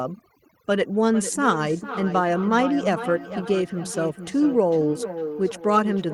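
A noise reduction stage set far too aggressively runs through the whole recording, cutting individual frequency bands down or out wherever they resemble its noise estimate. That is overdone noise removal: the background drops and breaks up into twinkling specks.

From 0.89 s to the end, a second device in the same room replays what the first microphone sent, and that microphone captures it again; neither echo canceller catches the other device's output. The result is feedback echo between two devices, with speech returning about every half second, peaking about 10 dB below the direct speech.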